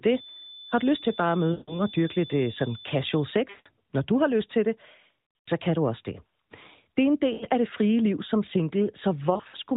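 Lost AMR speech frames occur at 1.52–1.81 s, 3.50–3.67 s before "når du har lyst", 5.41–5.49 s before "kan du også det", 7.34–7.45 s before "af det frie liv", and 9.34–9.57 s, where several short gaps are scattered. At each, corrupted frames forced the decoder to repeat its last good parameters at falling gain. The sound smears, then fades, before returning weak or rough.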